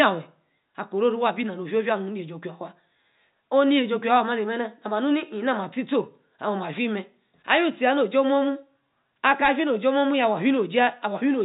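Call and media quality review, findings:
No faults found: the speech sits in a telephone band ending around 4 kHz, consistent with G.711 A-law coding working normally, with only the faint quantisation hiss that rises and falls with the signal level.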